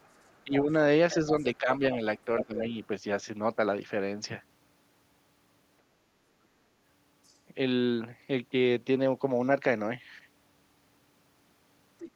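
Speech recorded on a call where the echo canceller likely left part of the loudspeaker signal in the microphone, so the other side's voice leaks through at 0.01–0.58 s, 1.39–1.43 s, 2.4–2.59 s, 7.25–7.35 s and 11.99–12.11 s. It ranges from barely audible scraps, around 35 to 40 dB below the talker, to a clear second voice only about 5 dB down near 2.5 s. When both sides talked at once, the canceller likely failed to separate talker from echo and turned both down, so speech is suppressed in double talk at 0.44–0.71 s, 1.58–1.82 s and 2.46–2.77 s. The talker's voice dips by roughly 10 to 15 dB in short bursts.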